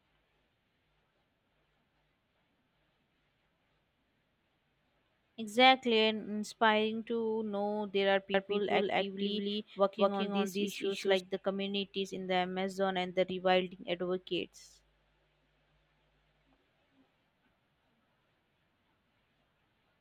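Speech, with a doubled audio track from 8.34 s to 11.20 s: a second full-band copy, about as loud as the original, trails it by around 200 ms, with no decay or room colour. It appears and disappears abruptly, likely from a slower duplicate capture path.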